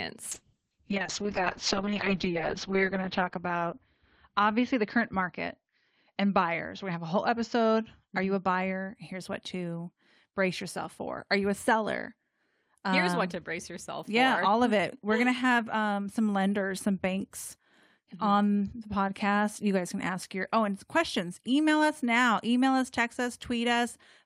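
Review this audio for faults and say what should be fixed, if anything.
A call bitrate drop runs from 0.32 to 9.01 s. The speech turns rough and muffled as the encoder codes with far fewer bits. The sound points to a fall from about 48 kbps to about 6 kbps. At the worst point, lasting 2.07 s, the coarse coding is plainest. The audio bandwidth also narrows from 20 kHz to 6 kHz, so the top end is cut away. Quality returns by 9.01 s. To prevent it, set a higher bitrate floor on the call so the encoder never drops this low when the bandwidth estimate falls.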